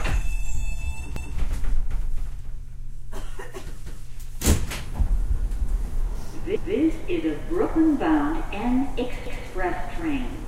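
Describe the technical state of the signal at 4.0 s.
A brief stutter runs from 3.86 to 4.06 s, where the same 200 ms stretch of sound plays twice at a join. This is overlapping chunks: the audio was handled in 2.5 s blocks, and this block began 200 ms before the previous one ended.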